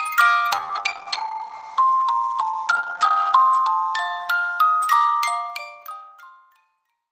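From 0.52 to 4.67 s the audio suffers a call bitrate drop: the encoder falls to what sounds like about 12 kbps from 40 kbps, cutting bandwidth from 20 kHz to 8 kHz. Unlike a plain low-pass filter, it also sounds coarse and watery. The fade-out near 5.5 s is smooth.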